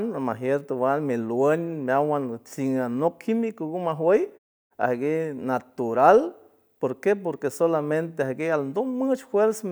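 No technical faults can be heard in this speech.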